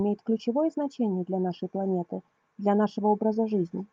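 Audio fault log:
No fault is heard in this speech recording.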